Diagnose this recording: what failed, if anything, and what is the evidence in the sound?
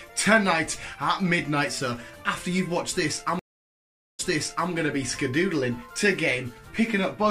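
Stream reconnect, from 3.39 s to 4.70 s, at the network stage. The audio cuts to silence for about 0.8 s, and when sound returns it picks up 0.51 s earlier than where it broke off, so a short stretch is heard twice. The connection dropped, playback stalled, and the player reconnected and started a fresh decoder. The server then resent a burst of buffered audio from slightly before the break, which explains the repeated material after the gap.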